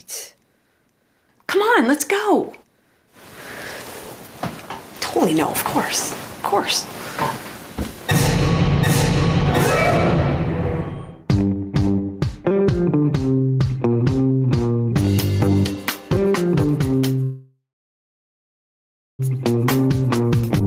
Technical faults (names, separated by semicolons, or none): gain pumping; call audio freeze; jitter buffer speed-up; skip ahead